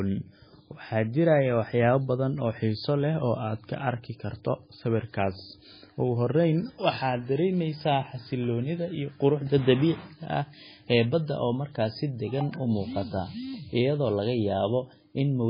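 From start to finish the speech sounds dull and watery, with a swirly, bubbling texture around the voice, and nothing at all above 5 kHz. That's likely heavy MP3 compression. Starved of bits, the encoder has chopped the treble off at a fixed point and is dropping weaker frequency lines that then flicker in and out between frames. The damage is severe enough to suggest a very low bitrate, somewhere around 16 kbps.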